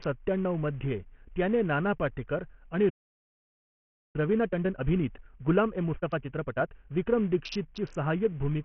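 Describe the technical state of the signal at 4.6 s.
At 4.6 s the signal sits inside a time-compressed catch-up running from 4.16 to 7.16 s. After a stall, the player clears its backlog by cutting out short pieces and cross-fading the joins, so the speech plays about 1.25 times faster at unchanged pitch.

Underneath, the whole clip carries heavy damage that is likely from Bluetooth SBC compression. The treble drops out or flickers, the remaining bands are coarsely quantised, and the gritty noise and aliasing point to a starved bit pool at roughly 48 kbps.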